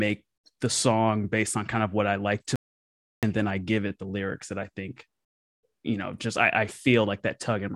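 From 2.56 to 3.23 s an audio dropout to silence cuts the speech mid-flow for 0.67 s, likely a lost input; unlike a pause, even room tone vanishes.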